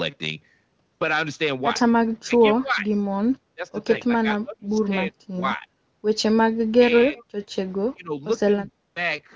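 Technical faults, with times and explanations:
2.25 to 2.88 s, 3.55 to 3.68 s, 4.05 to 5.67 s, 6.77 to 7.23 s, 7.94 to 8.13 s and 8.71 to 8.95 s, speech suppressed in double talk: the speech sinks in level or breaks into fragments. The dip is deepest around 4.05 to 5.67 s, at about 30 dB, and elsewhere runs from about 10 to 20 dB. The likely cause is an echo canceller that heard both ends at once, could not tell the near talker from loudspeaker echo, and attenuated everything.
7.17 to 7.23 s, echo leak: a faint delayed copy of the speech appears, trailing the original by about 200 ms and sitting about 30 dB below it, so it registers as a brief ghostly scrap. It overlaps the end of the suppression at 6.77 to 7.23 s. The far end's loudspeaker sound likely reached its microphone, and the echo canceller left a residue that was sent back down the call.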